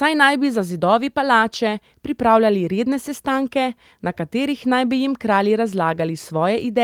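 Listening through the speech recording, nothing stood out as a technical fault at any point.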